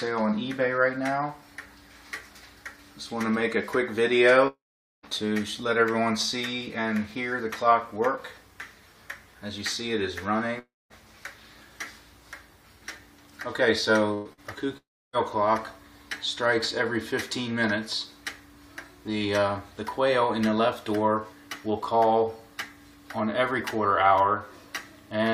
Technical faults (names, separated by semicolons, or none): long network dropout; burst of packet loss; short concealed packet loss